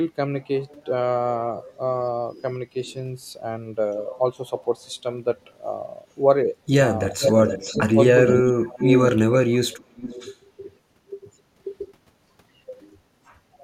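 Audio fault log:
2.86 to 10.35 s, echo leak: A delayed copy of the speech returns about 430 to 450 ms late. It is a faint scrap at 2.86 to 2.94 s, about 30 dB down. It is nearly as loud as the talker, about 5 dB down, at 7.21 to 7.82 s and 8.26 to 9.12 s. It is about 20 dB down at 9.72 to 10.35 s. The cause is likely a loudspeaker echo that the far end's canceller failed to remove.
7.13 to 9.91 s, speech suppressed in double talk: The talker's level dips briefly at 7.13 to 7.20 s, 7.91 to 7.98 s, 8.49 to 8.74 s and 9.84 to 9.91 s. The drops range from about 10 dB to about 30 dB. Each falls during or just beside the echo. The canceller likely mistook the talker for echo and turned both down.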